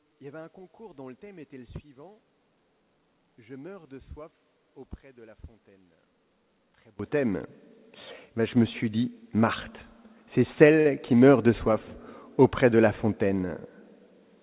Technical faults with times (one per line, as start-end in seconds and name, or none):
0.00-6.99 one channel inverted
10.80-10.87 short stall from a late packet